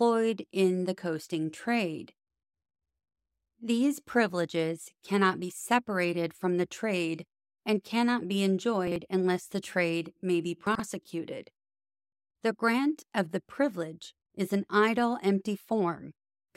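Chunks out of order at 8.88–8.96 s, after "trade and cannot be", and 10.67–10.80 s, after "the trade may be": roughly 43 ms blocks play one and then two chunks late, giving jumbled moments.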